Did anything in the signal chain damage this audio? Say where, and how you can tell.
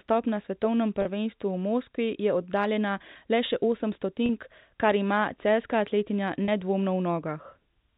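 Yes, at the network stage: three brief buzzy held moments, each about 30 ms, at 1.02–1.05 s after "na svetovnem", 4.26–4.29 s after "oddaljena le še osem", and 6.45–6.48 s after "kar ima celjska atletinja". That is packet loss with pitch repetition. Each gap fits one lost packet, which the receiver bridged by repeating the last pitch period.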